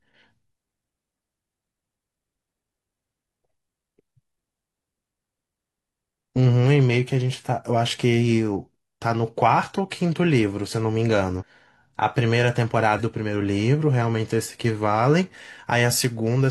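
At 2.03, 11.37 and 12.95 s, compressed frames are skipped. The speech jumps ahead about 100 to 150 ms.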